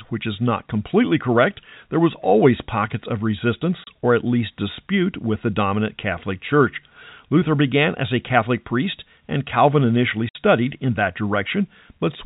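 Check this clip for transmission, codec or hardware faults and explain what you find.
The speech has two dropouts from packet loss filled with silence. At 3.84 s, just before "or at least dispute", a 30 ms gap opens, which fits one lost packet. At 10.29 s, before "in that", the gap lasts 60 ms, consistent with two consecutive packets. The receiver played digital silence in place of the missing audio, so each hole has hard edges. Loss concealment would instead smear or repeat the neighbouring sound. The telephone band of the G.711 coding carries through the speech around both gaps.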